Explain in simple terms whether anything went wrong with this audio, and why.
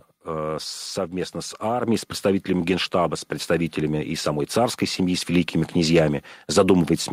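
The microphone volume stepped up twice, at 1.83 s after "совместно с" and at 5.34 s after "самой царской семьи с". Each time, the call software judged the microphone too quiet and raised its input level in one jump. The voice and background noise get louder together, right mid-sentence.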